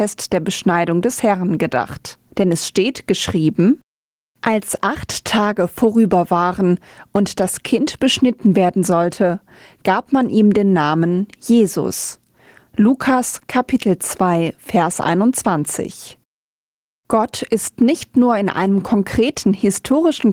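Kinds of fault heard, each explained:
gain pumping: The swing is roughly 10 dB. Loud and soft parts sit close together, so the speech sounds squashed. Likely cause: gain set too high, pulled down by a fast limiter.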